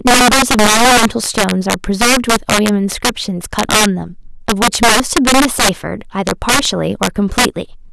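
Integer overflow runs throughout the speech: the signal is driven about 10 dB past full scale, and instead of being limited, each peak wraps to the opposite sign. A small fraction of samples, roughly one in twenty, flip across the range, producing harsh cracks on louder syllables.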